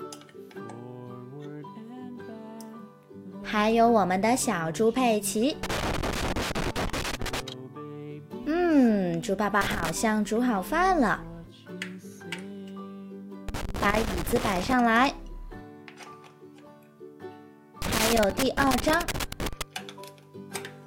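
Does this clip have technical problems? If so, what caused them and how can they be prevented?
Yes. Loose connector crackle appears four times: 5.63 to 7.40 s, 9.61 to 9.90 s, 13.49 to 14.73 s and 17.82 to 19.62 s. A worn or dirty contact intermittently makes and breaks, chopping the audio in irregular bursts, with clicks where any DC offset jumps. On a waveform this shows as ragged dropouts and sharp spikes; a spectrogram shows scattered vertical broadband streaks through those spans. Cleaning or replacing the connector and securing the cable against movement prevents it.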